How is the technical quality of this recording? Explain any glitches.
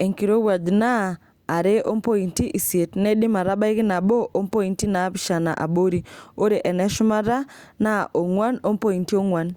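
No technical faults can be heard in the recording, so there are no glitches to explain.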